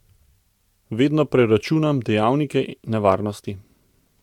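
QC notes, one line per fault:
No faults heard.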